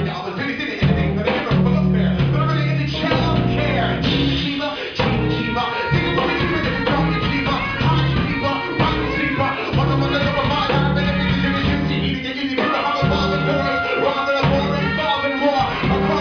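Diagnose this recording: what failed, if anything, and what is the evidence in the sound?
Nothing failed here; nowhere along the chain does the recording give away a problem.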